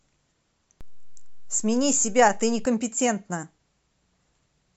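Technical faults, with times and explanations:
0.81 to 2.65 s, DC step: the waveform's zero line jumps at 0.81 s, holds there, and drops back at 2.65 s, giving a dull low thump at each edge. The speech carries on unchanged, which sets it apart from a dropout or digital click that breaks the signal itself.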